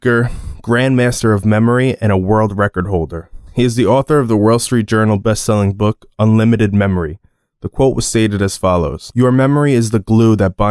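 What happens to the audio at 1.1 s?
Nothing goes wrong at 1.1 s; the speech continues intact through that moment.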